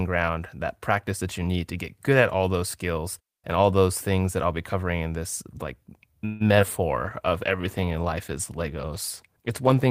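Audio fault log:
6.25 to 6.42 s, call audio freeze: right after "covering in this like" the sound stalls into a fading buzz or hiss for about 0.15 s, then resumes; likely late packets draining the jitter buffer.
6.60 and 6.62 s, short concealed packet loss: two back-to-back dropouts totalling 60 ms get patched by extending the previous sound, leaving a quick smear or wobble there.
7.0 s to the end, call bitrate drop: the encoder falls from 32 to 18 kbps and stays there, so the sound turns coarser and duller with less top end.
7.29 to 7.86 s, jitter buffer slow-down: the receiver repeats tiny pitch periods to rebuild its reserve, adding 55 ms, so this stretch plays at roughly 92% speed, drawn out but same pitch.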